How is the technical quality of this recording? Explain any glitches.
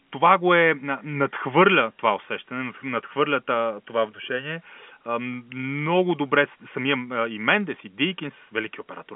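The technical quality holds up, and there are no glitches to explain in this telephone-band speech recording.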